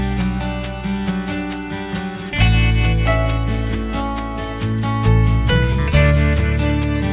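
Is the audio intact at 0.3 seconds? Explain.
No. At 0.3 seconds, as throughout the clip, the audio carries aliasing. It was resampled down to a much lower rate without a proper anti-alias filter first, which points to a drop from 48 kHz to 8 kHz. Anything above the new 4 kHz limit folds back below it as false, unrelated tones, sitting roughly 25 dB under the real signal. The result is a gritty, metallic edge, with energy crowding right up against 4 kHz.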